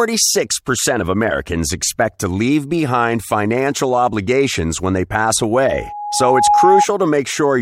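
Loudspeaker feedback squeal runs from 5.63 to 6.86 s in this speech clip: a single tone near 826 Hz swells over roughly a second until it sits a few decibels above the speech. The microphone is hearing the loudspeaker it drives, and around 826 Hz the round trip through the system returns more than it sends, so that frequency keeps reinforcing itself until the loop is broken or the amplifier runs out of headroom.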